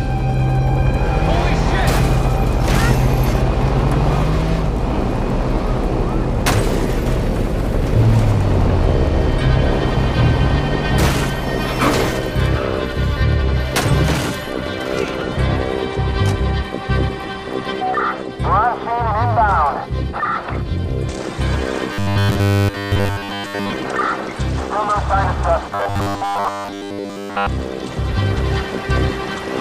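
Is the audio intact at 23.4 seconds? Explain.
No. At 23.4 seconds the clip is inside a stretch of robotic sound from repeated short buffers, running from about 21.93 to 23.70 s. The sound turns into a rigid, metallic buzz at 100 Hz that loosely follows the original. The likely cause is fresh audio arriving too slowly, so the same chunk replays over and over while the real material is dropped. Essentially all of this span is repetition. A 100 Hz buzz fits a chunk about 10 ms long.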